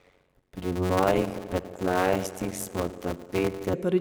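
It's a speech clip, and from the start through about 3.73 s it's got a block size mismatch (padded) problem. One stage is handing over shorter blocks than the next one expects, and the leftover space in each is zero-filled. Those regular little dropouts make a buzz at roughly 92 Hz. The speech also plays back slower, at about 0.53 times normal speed, while keeping roughly its normal pitch. That pattern fits 256-sample writes into a larger read block.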